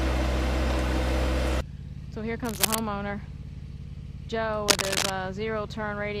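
Cable scratch noise rasps over the audio at 2.44–2.79 s and, louder, at 4.68–5.10 s: dense, uneven rustling rather than isolated clicks, likely from a worn cable or connector being moved.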